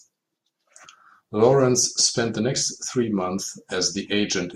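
No technical faults can be heard anywhere in the recording, and the signal stays steady and intact throughout.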